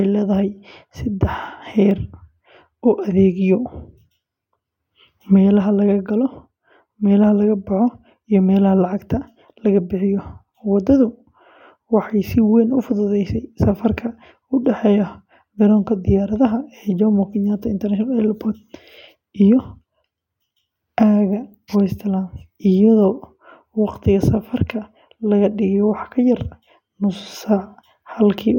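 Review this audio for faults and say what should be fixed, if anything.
Nothing here needs fixing, as there are no faults to flag anywhere in this speech recording.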